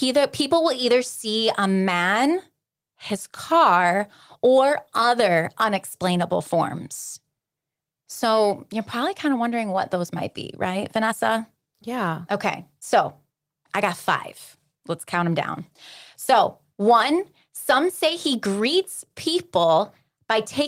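A speech recording whose signal carries no audible technical fault at any point.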